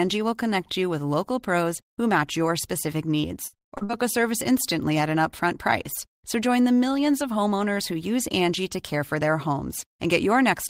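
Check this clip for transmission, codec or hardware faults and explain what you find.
The clip has one transmission fault: repeated packet loss (robotic sound) in the speech from 3.21 to 3.91 s. Over that stretch, roughly half a dozen short holes follow closely on one another, the longest about 79 ms. The receiver patches each hole by stretching the last sound it got, so about 40% of the span is filled-in audio. The result is choppy speech with fragments missing. Unlike a single dropout, the holes cluster, and unlike steady codec distortion, the effect stops cleanly once the losses end.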